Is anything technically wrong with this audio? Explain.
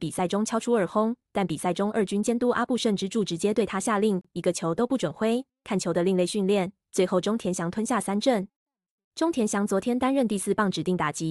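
Yes. At 4.21 to 4.25 s there is a gap at a join of encoded pieces: separately encoded segments were spliced without removing each encoder's start-up delay and last-frame padding. This leaves a silence of about 32 ms in the speech, with smeared edges before it resumes.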